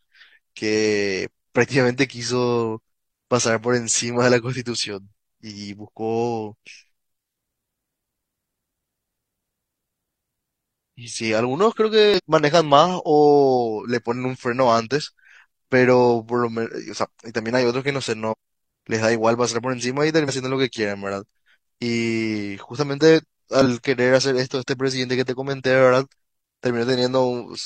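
Damaged data in a compressed stream appears at 12.14–12.20, 18.28–18.34, 20.25–20.30 and 23.62–23.67 s: corrupted bytes make the decoder misread frames and lose sync until it finds the next frame header, leaving short glitches of about 50–60 ms in the speech.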